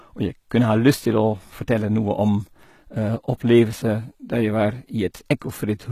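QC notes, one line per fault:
Throughout: HE-AAC compression, likely the cause of the damage heard across the whole speech clip. The high band has a bright but synthetic character, with s sounds coming out gritty and metallic. This happens because the treble is rebuilt from copied lower bands rather than coded, so its harmonics do not line up with those below the crossover. The damage is plainly audible, which fits a rate near 20 kbps, and nothing sounds above 14.9 kHz. Unlike a plain low-pass or ordinary low-rate codec, which leaves the top dull, here the top stays bright but sounds wrong.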